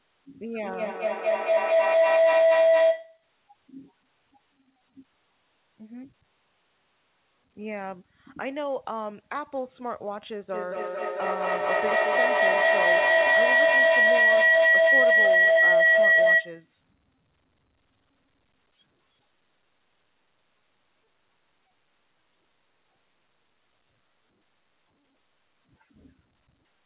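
Speech clip, heard over a narrowband call path with nothing above 4 kHz, with feedback howl from 0.59 to 3.29 s and from 10.54 to 16.76 s. The first howl sits near 700 Hz and the second near 2 kHz. Each builds to about 13 dB above the speech, with a loop delay of roughly 200 ms. Unlike echo, the repeats grow rather than fade.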